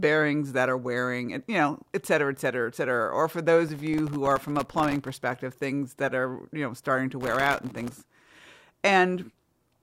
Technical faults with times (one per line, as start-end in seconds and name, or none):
3.69-5.40 processor overload crackle
7.21-8.43 processor overload crackle